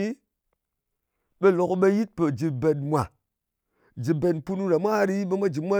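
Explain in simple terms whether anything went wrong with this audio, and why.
Nothing went wrong here: the speech has no audible faults anywhere in the recording.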